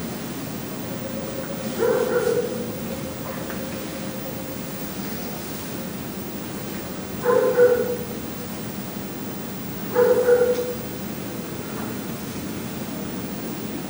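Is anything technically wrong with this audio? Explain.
No, nothing technically wrong can be heard here.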